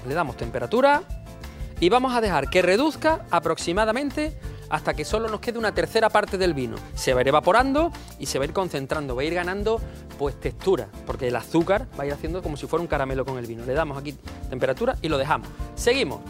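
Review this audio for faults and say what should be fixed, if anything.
Nothing stood out on listening, so there is nothing here that needs fixing.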